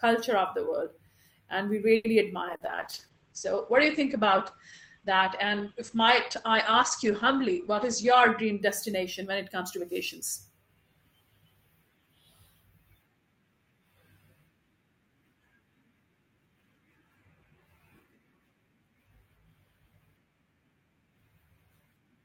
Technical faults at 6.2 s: call bitrate drop

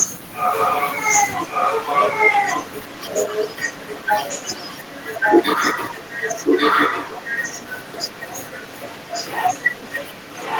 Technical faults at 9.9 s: echo leak

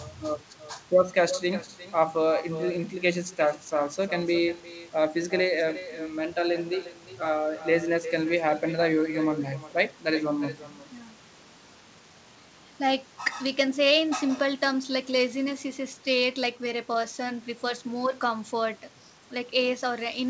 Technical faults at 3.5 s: echo with no canceller

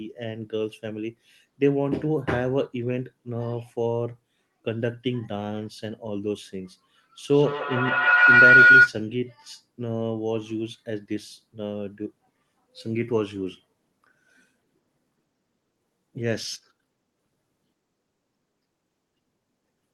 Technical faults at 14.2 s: none

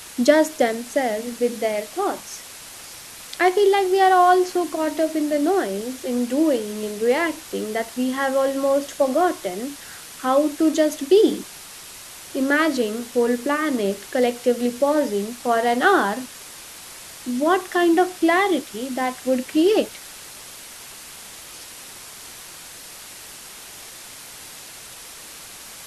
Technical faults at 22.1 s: low bit depth with dither

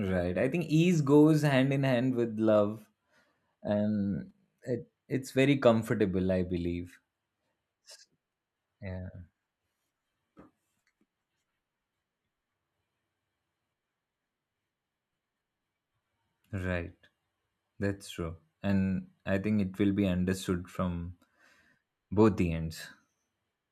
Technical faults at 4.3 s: repeated buffer

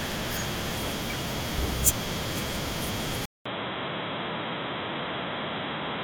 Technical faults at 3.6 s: input switched to a poorer device

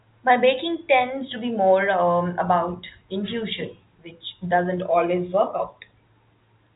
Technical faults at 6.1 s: none

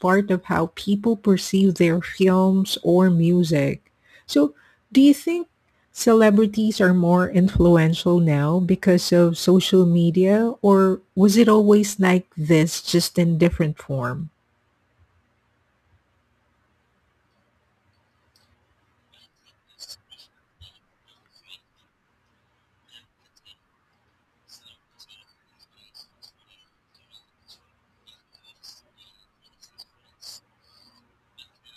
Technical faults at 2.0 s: imaging from sample-and-hold upsampling

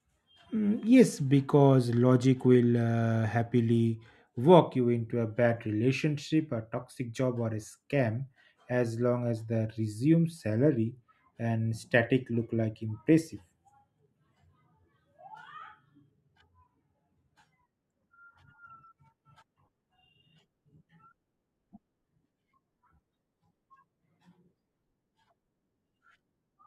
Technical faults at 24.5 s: section at the wrong speed

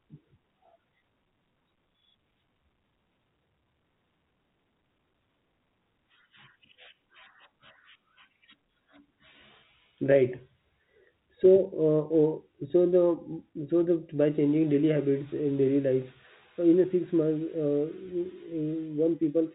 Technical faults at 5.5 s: none

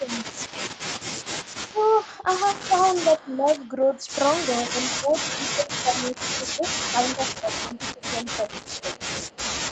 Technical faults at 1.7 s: echo leak; speech suppressed in double talk

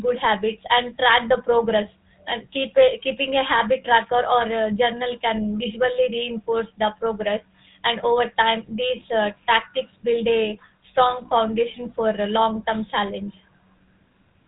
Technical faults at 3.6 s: GSM full-rate codec

